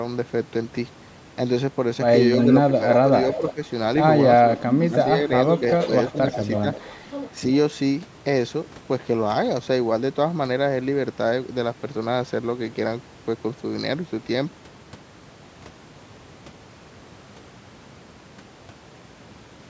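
Speech with an echo leak at 2.39–2.45, 3.32–3.53 and 6.08–6.92 s: a faint copy about 15 dB down, trailing by roughly 340 ms, likely from an echo canceller letting loudspeaker pickup through, visible as ghosted, offset spectrogram streaks. Speech suppressed in double talk at 2.68–3.61 and 4.47–6.67 s dips the talker by up to about 10 and 15 dB in patches, showing as notched waveform envelopes.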